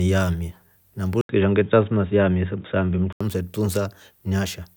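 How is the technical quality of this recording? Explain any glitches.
The recording has one clear glitch in the middle of the speech.

Input switched to a poorer device, from 1.21 to 3.21 s: the sound abruptly turns dull and boxy, with nothing above 3.8 kHz, and a faint new background noise appears, about 35 dB below the speech. The likely cause is the system changing to a narrower-band microphone or headset profile and then back. An 80 ms silence marks the switch, and the loudness stays about the same throughout.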